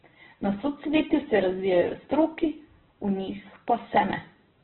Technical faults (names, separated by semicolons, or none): Opus compression